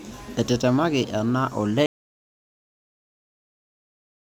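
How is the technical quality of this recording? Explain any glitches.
The recording has one serious fault. An audio dropout to silence starts at 1.86 s and runs to the end: the input was likely lost, so only silence follows, with the speech cut off mid-flow and no room tone.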